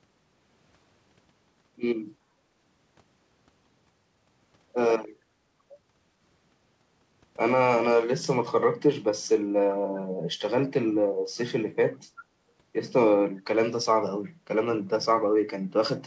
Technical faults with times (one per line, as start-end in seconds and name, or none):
2.44-2.55 background gated by the echo canceller
12.17-12.22 echo leak